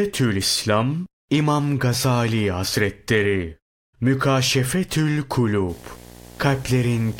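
From 5.69 s to the end of the clip, a video or display buzz appears: a screen or video cable is coupling into the audio path, producing a 60 Hz field-rate buzz with hash above it, roughly 20 dB below the speech.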